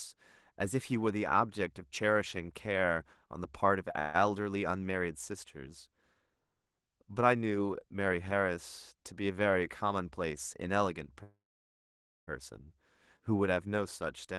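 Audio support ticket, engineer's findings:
Call audio freeze, 3.99–4.16 s and 11.23–12.29 s: packets likely delayed, jitter buffer ran dry; speech stops, last sound held as fading buzz, second gap mostly silent, then resumes intact.

Jitter buffer speed-up, 9.04–10.31 s: buffer overfilled, receiver trimmed repeated pitch-period slices, roughly 0.15 s total; speech runs about 11% fast, same pitch, sounds hurried.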